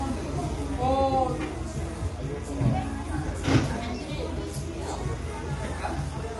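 Throughout, the everyday sounds carry plainly audible low-delay AAC compression, likely AAC-ELD at a rate consistent with 32 kbps. Its short frames resolve fine tonal detail poorly, leaving a rough, grainy texture. A spectrogram shows noise filling gaps between tonal lines and nothing above 11.6 kHz.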